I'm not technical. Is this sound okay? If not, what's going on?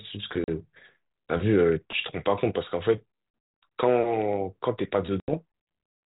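No. This is speech over a digital phone call, and it has packet loss on an ADPCM call. Small chunks of the sound never arrived. They were replaced by silence. Gaps fall at 0.44 s, between 3.3 and 3.54 s, where the longest gap lasts 140 ms, and at 5.2 s. After each hole, the sound comes back briefly at the wrong loudness, or with a click and slight roughness. It settles quickly.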